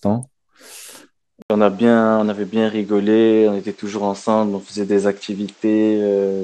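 At 1.42 s the speech drops out for about 80 ms, then returns with nothing above 8.5 kHz and a new, different background noise sitting roughly 35 dB under the speech, all at about the same loudness. It stays that way to the end. This is most likely an input switched to a poorer device. The brief gap and the changed noise floor set it apart from a plain filter or codec bandwidth drop, which would leave the background character unchanged.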